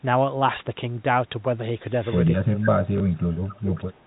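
Telephone speech, carried over narrowband A-law coding, has three kinds of fault, all in its second half. An echo leak appears from 2.03 to 2.36 s and again from 3.48 to 3.6 s: a faint delayed copy of the voice returns about 253 ms and 261 ms later, roughly 25 dB and 20 dB below the speech. It is likely caused by a far-end loudspeaker whose echo canceller let part of the signal through to be sent back. Unlike room reverberation, which trails off smoothly, this is a separate, repeated copy arriving a quarter second behind. Speech suppressed in double talk runs from 2.37 to 4.05 s, with about one and a half seconds of the voice affected. The talker's level dips by as much as about 25 dB and thins or breaks up in pieces, likely because the echo canceller could not tell this talker from its own loudspeaker echo while both sides spoke and turned everything down. These are broad level drops and dulling rather than sharp glitches, which separates them from the packet fault. 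Packet loss with the last packet repeated occurs at 2.98 s, where a single 20 ms packet went missing and the previous one was replayed. The result is a small blip. Because only one packet was lost, there is no sustained buzz.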